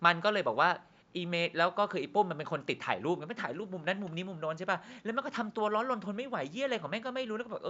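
Nothing stood out on listening to this speech recording.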